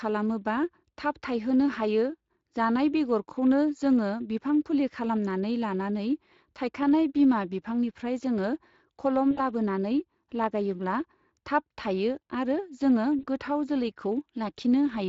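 Throughout the speech, the Speex codec leaves plainly audible damage. This CELP coder rebuilds each stretch of speech from a predicted spectral envelope plus a coded excitation signal. Here the excitation is coded too coarsely to reproduce the source cleanly, so the voice carries a grainy, hoarse roughness and a noisy edge. The degree of damage fits a bitrate of around 20 kbps.

At 9.31 to 9.40 s and again at 13.19 to 13.26 s, the sound is broken by VoIP packet loss concealed by the speech codec. About 60 ms goes missing in the first gap, consistent with three 20 ms frames, and about 40 ms in the second, consistent with two. The decoder fills each hole by repeating its last pitch and filter state at falling gain, so the speech smears into a brief buzzy tone or coloured noise that fades. Because each frame is predicted from the previous one, it then sounds weak and distorted for a short time after normal packets resume.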